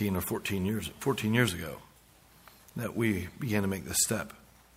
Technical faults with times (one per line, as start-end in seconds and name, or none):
none